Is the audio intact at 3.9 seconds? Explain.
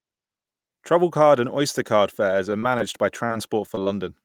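No. Repeated packet loss (robotic sound) runs from 3.26 to 3.88 s and ends right at that moment. Over this stretch, packets kept arriving late or not at all. There were four gaps, the longest 34 ms, and each was patched by stretching the preceding sound for about 81 ms in total while about 60 ms went missing. The result is choppy, robotic-sounding speech with small pieces dropped, and it clears only as 3.9 s arrives.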